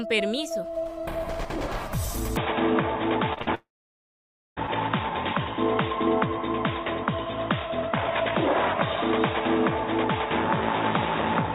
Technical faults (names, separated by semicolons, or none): input switched to a poorer device; short concealed packet loss; burst of packet loss; long network dropout